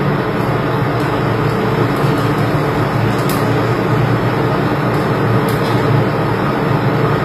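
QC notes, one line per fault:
Throughout, HE-AAC compression: the treble stays bright but sounds gritty and metallic, and nothing survives above 15.4 kHz. That pattern points to band replication, likely at a low bitrate around 24 kbps, where upper bands are copied from lower ones and shaped only coarsely, so their harmonics miss the originals. A plain low-pass would sound dull instead, and ordinary low-rate coding would lose the treble rather than fill it with this synthetic sheen.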